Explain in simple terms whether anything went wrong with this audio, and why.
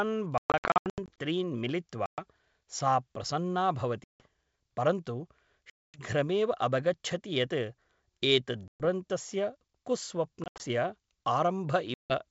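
Packet loss on an ADPCM call causes gaps at 0.38 to 1.19 s (scattered), 2.06, 4.04, 5.70, 8.68, 10.44 and 11.94 s. Missing chunks become silence, and the decoder briefly loses track, so speech returns slightly distorted.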